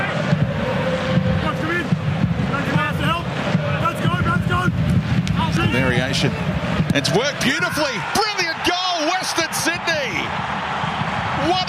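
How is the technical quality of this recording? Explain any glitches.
The recording has one clear glitch. A loud pop at 5.57 to 5.59 s, roughly 10 dB above the surrounding sound, is likely a voltage spike from a plug, switch or static, heard as a single sharp pop over the continuing audio.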